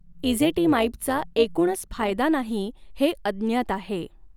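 From 0 to 2.19 s, the speech carries overlap-add ripple, ending just before "नाही हे". Frames were rejoined with overlaps that do not sum evenly. Level swings about 6 dB roughly 150 times a second. It sounds like a metallic buzz with extra tones around the voice.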